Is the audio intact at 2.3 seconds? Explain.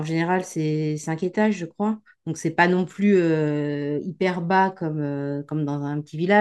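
Yes, the audio at 2.3 seconds is intact, with no dropout, click, distortion or other fault audible at that moment.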